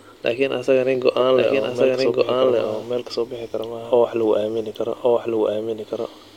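A doubled audio track runs throughout the speech. A second full-band copy trails the original by about a second, at roughly the same loudness. It has no decay or room colour. The likely cause is a slower capture path recording everything again.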